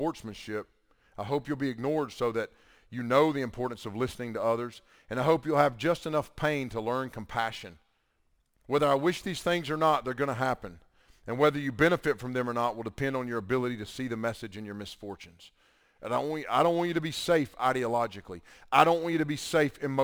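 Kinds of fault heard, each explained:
Crude rate conversion: the speech was moved from 48 kHz to 44.1 kHz by simply grabbing the nearest sample rather than filtering and resampling properly, so samples get skipped in a pattern set by the ratio between those two rates. That timing error turns into a gritty, inharmonic fizz riding along with the voice the whole way through, sitting very roughly 30 dB below it and most audible on louder and brighter syllables.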